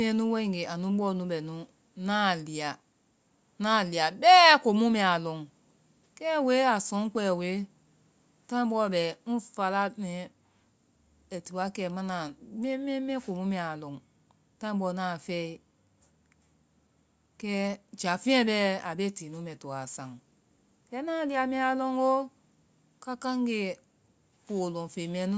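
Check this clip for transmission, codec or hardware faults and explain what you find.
No faults can be heard in this speech recording.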